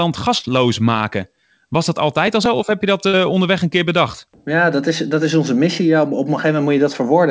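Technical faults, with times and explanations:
0.38–0.45 s and 3.07–3.15 s (between "zo of heb je" and "onderweg een keer bedacht"), burst of packet loss: about 60 ms of audio is lost. The receiver fills the gap by extending the preceding sound and letting it fade, rather than leaving silence. The audio then resumes with that stretch missing.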